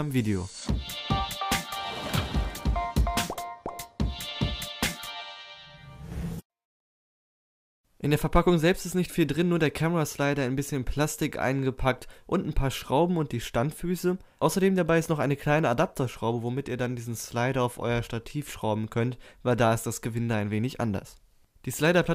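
No technical faults can be heard anywhere in the audio. Nothing in it calls for a time mark or a note about the signal path.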